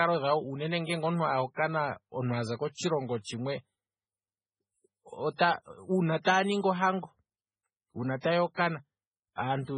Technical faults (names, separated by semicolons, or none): MP3 compression